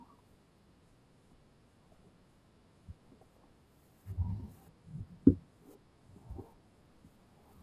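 Speech played back at the wrong sample rate throughout, with no conversion, slows the speech to about 0.73 times its speed and lowers it roughly 5.5 semitones, which fits 44.1 kHz audio run at 32 kHz.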